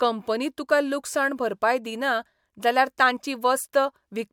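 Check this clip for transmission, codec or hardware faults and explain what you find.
No faults turn up on checking this clip.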